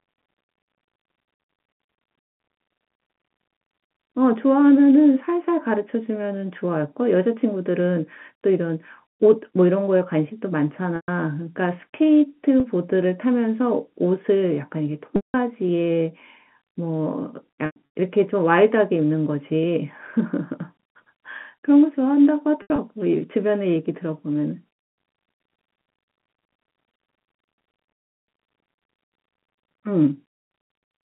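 Packet loss with pitch repetition hits at 10.96–11.08, 12.60–12.64, 15.16–15.34, 17.66–17.76, 22.62–22.78 and 27.98–28.28 s. The receiver loops the last pitch period over each gap, so you hear a brief buzzy hold that fades toward silence on the 300 ms dropout.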